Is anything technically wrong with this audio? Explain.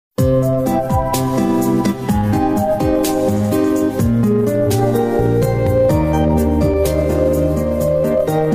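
Yes. Dropped samples at 1.36 s: a tiny fraction of a millisecond of the stream appears to be missing, likely a handful of samples lost in transfer, so the waveform jumps straight from one value to a later one instead of moving smoothly between them. That step is far too brief to take away any audible sound. It comes through as a single sharp click, and on a spectrogram it shows as a thin vertical line running across the frequency range.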